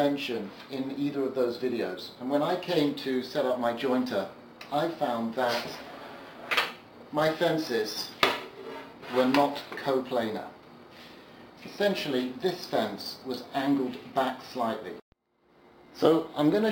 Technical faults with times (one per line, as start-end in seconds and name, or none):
0.00-16.71 imaging from sample-and-hold upsampling